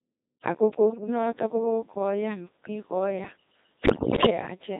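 Throughout, the speech carries the signature of the Codec 2 vocoder: heavy, robotic and buzzy, with no natural waveform detail. The decoder rebuilds the voice from pitch, voicing, energy and a coarse spectral envelope using sine waves, and the degree of smearing fits a 2.4 kbit/s mode.

From 0.87 to 1.08 s, bit errors on the digital voice radio link hit the vocoder stream. The error rate sounds like a few percent, around 7%, and it looks to have corrupted about eight frames. Pitch, level and tone colour jump abruptly, producing short warbles.

A heavier burst of bit errors runs from 3.84 to 4.3 s, at a rate nearer 15%, spanning roughly twenty frames. Each corrupted frame decodes with wrong pitch, voicing or spectrum, so the voice dissolves into bleeps and robotic gibberish for that stretch.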